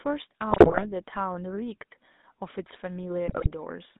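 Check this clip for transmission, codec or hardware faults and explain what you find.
Two codec faults are present: GSM full-rate coding throughout, and two bursts of GSM bit errors.

GSM full-rate codec, whole clip: pulse-excited vocal-tract modelling, which fits 13 kbps, leaves plainly audible buzzy roughness. The spectrogram shows energy confined to 200 Hz–3.7 kHz with coarse harmonics.

GSM bit errors, 0.50–0.85 s and 3.28–3.49 s: corrupted filter, pitch and gain values produce squawks and gargling, seen as smeared spectral blotches and sudden waveform level spikes.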